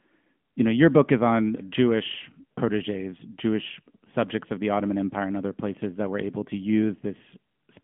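A speech clip that runs the whole way through an AMR narrowband mobile codec: it's band-limited to roughly 150 Hz to 3.4 kHz with nothing above 3.6 kHz, and the pulse-driven vocal-tract model leaves a plainly buzzy, synthetic edge, which fits a mid-rate mode of about 10 kbps.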